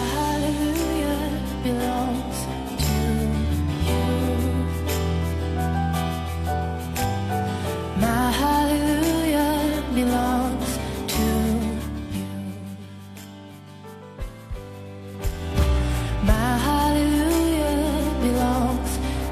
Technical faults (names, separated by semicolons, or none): zipper noise